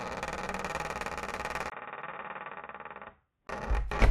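From 1.70 to 3.49 s the input likely switched to a poorer device; after a 20 ms gap the sound turns dull, with nothing above 3.8 kHz.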